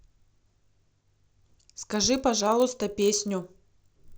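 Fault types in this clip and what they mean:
Resampler restarted on every block: the 16 kHz to 48 kHz conversion runs on each 20 ms block in isolation, so every block edge lacks its true neighbouring samples and carries a small error, heard as a 50 Hz buzz that appears only while speech is present.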